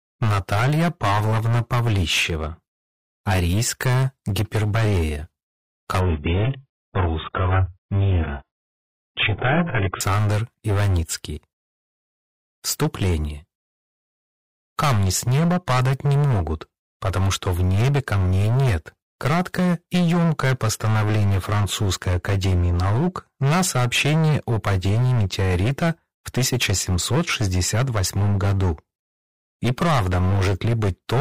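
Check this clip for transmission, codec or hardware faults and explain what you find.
Two faults are audible. Throughout the clip, every loud passage carries a harsh, buzzing fuzz: hard clipping. The signal overdrives a stage by about 22 dB, so roughly a fifth of the waveform has its peaks sliced flat, spraying harmonics high up the spectrum. From 6.0 to 10.0 s, the sound abruptly turns dull and watery, with nothing above 3.8 kHz and no gap at either edge. This is an adaptive stream dropping to a lower bitrate. The starved encoding points to a fall from a high-quality stream to a very low bitrate, around 8 kbit/s, before it recovers.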